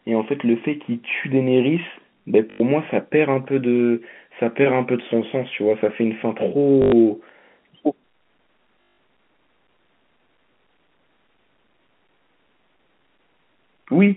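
Packet loss with last packet repeated strikes at 2.5 to 2.6 s, 6.82 to 6.92 s and 8.82 to 8.98 s. The receiver replayed its final packet across each gap, so the telephone-band speech buzzes near 50 Hz, which fits 20 ms packets: a brief robotic stutter.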